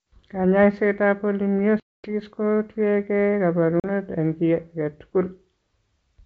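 At 1.80 to 2.13 s, and again at 3.80 to 3.87 s, packet loss on an ADPCM call cuts hard-edged silent holes of 240 ms and 40 ms. The decoder's predictor and step size lose track of the sender's, so the wideband G.722 speech resumes slightly distorted before settling.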